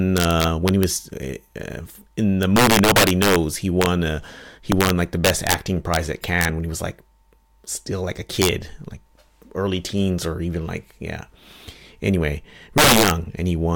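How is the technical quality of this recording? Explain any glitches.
The recording is marred by integer overflow on its loudest speech. It happens at 0.17–0.83 s, 2.43–3.36 s, 3.82–3.86 s, 4.72–5.54 s just after "a he", 5.94–6.45 s before "when he was like", 8.42–8.49 s between "still like a" and "like early teens or", and 12.78–13.11 s. Peaks pushed past the integer ceiling, by about 1 to 9 dB, wrap to the opposite sign instead of being limited. The result is violent cracks, harsher than clipping. They are worst at 2.43, 4.72 and 12.78 s.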